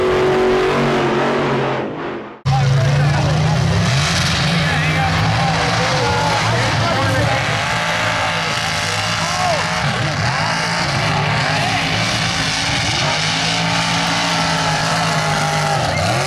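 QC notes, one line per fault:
Nothing stood out on listening to this audio.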